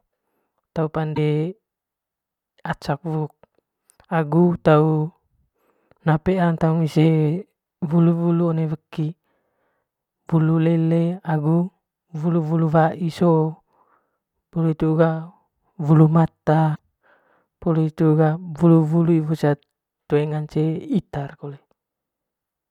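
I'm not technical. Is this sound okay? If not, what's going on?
No. There are two short glitches, from 1.12 to 1.18 s and from 16.72 to 16.79 s, caused by damaged data in a compressed stream. Corrupted bytes make the decoder misread those frames and lose its place, producing brief glitches.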